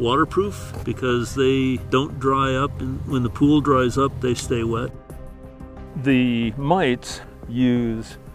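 No technical faults can be heard in the audio.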